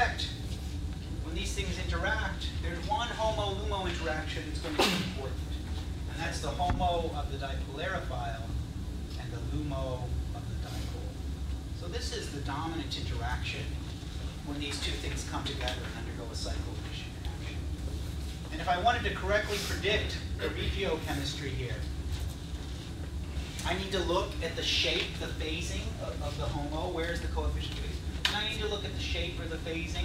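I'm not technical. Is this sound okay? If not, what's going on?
Yes, this sound is okay; nothing is going wrong with it.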